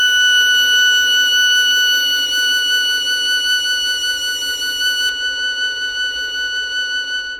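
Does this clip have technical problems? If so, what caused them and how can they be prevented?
Yes. From 5.09 s, de-emphasis was applied wrongly, cutting treble by about 10 dB at 10 kHz, so the music turns dull and muffled. To prevent it, confirm that the source actually carries pre-emphasis before enabling de-emphasis, and apply it only once in the chain.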